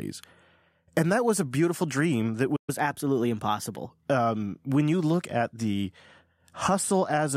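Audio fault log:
2.56–2.70 s, playback stall: Just after "a beautiful dream that", the speech cuts out mid-flow. Silence holds for 120 ms. The speech then resumes from the point where it stopped, so nothing is skipped. The player most likely ran short of buffered data, or its playback thread was briefly blocked. With nothing to send to the output, it produced silence until data arrived again. The gap is long enough to hear as a clear break.
2.70–3.90 s, catch-up at higher speed: Straight after the stall, the speech plays at 1.1 times normal speed for about 1.2 s. The pitch rises by roughly one and a half semitones, so the speech sounds slightly hurried and higher. The player is working off the backlog left by the stall. It resamples that audio to run faster, which shifts speed and pitch together. Once the lost time is regained, both settle back to normal.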